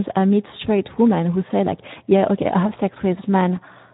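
Speex codec coding runs through the whole speech clip. This CELP coder models the voice as a filtered excitation signal. Its damage is plainly audible, and the degree fits a setting of roughly 11 kbps, where too few bits describe that excitation and the voice takes on a rough, grainy, hoarse texture. The band is also cut hard, with nothing above 3.8 kHz, so sibilants and airy detail are missing and the sound is narrow and telephone-like.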